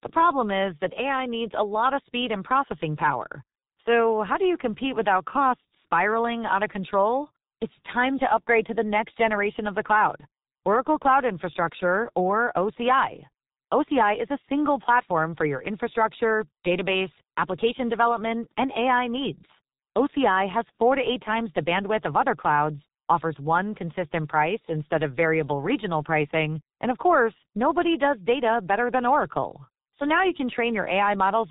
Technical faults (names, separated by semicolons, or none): G.723.1 codec